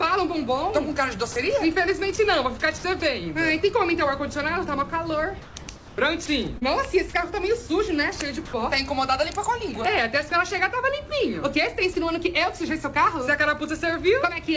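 The audio passes through a call codec whose content stops at 8 kHz, consistent with G.722, so a spectrogram shows an empty band above that line throughout. Sound dropped by the voice detector occurs three times: 40 ms at 1.32 s, then briefly at 10.29 s and 11.93 s. Each is likely the sender's detector briefly judging the sound as background. The waveform shows a short flat patch of low, even noise, and the spectrogram a thin smooth stripe. Sound chopped by the voice detector runs from 2.16 to 3.02 s (about 120 ms replaced) and from 5.42 to 7.13 s (about 495 ms), likely from the detector toggling repeatedly. The waveform is gated into fragments, and the spectrogram shows detailed texture alternating with uniform noise blocks. At 8.45 s, about 80 ms of comfort noise replaces the background, likely from discontinuous transmission. It sits about 19 dB below the loudest sound and within about 1 dB of the real background, so it appears as a featureless patch on the spectrogram.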